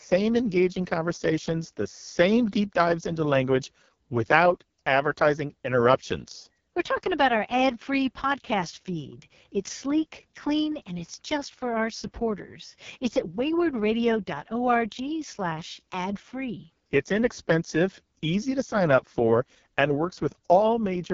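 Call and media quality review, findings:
AMR wideband (HD Voice) codec, whole clip. Speech rough and raspy throughout, heavy coding damage. Nothing above about 7.1 kHz. Roughness points to the lowest AMR-WB mode, around 6.6 kbit/s. Mechanism: pulse-excited vocal tract model starved of bits below 6.4 kHz, coarse excitation gives the rasp. Top band is synthetic shaped noise. Probable component: AMR-WB encoder at its lowest rate.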